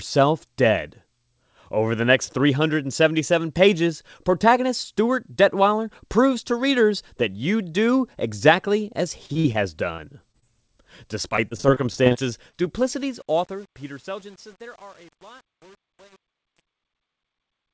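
Packets on this speech recording's call link were lost or arrived late again and again in three bursts, 9.26 to 9.56 s, 9.96 to 10.71 s and 11.29 to 12.66 s. The receiver bridged each hole by stretching the last sound it had, so the voice turns choppy and robotic there, with short pieces missing. This repeated packet loss is densest in the first burst, where patched sound fills about 40 percent of the span and the longest hole runs 44 ms. From 12.77 s to the end, the level stage handling the fade-out keeps too few bits and adds no dither, which fits an 8-bit path. As the fade, starting at 12.77 s, approaches the smallest step, the waveform collapses into a few square steps. This truncation distortion on a fade turns the tail gritty from 13.02 s onward. The call codec, which sounds like G.722, leaves nothing above 8 kHz.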